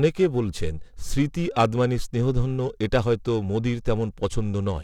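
Throughout, periodic clock jitter near 1 kHz gives the speech a metallic roughness; a spectrogram shows sidebands flanking each harmonic at that spacing, strongest high up.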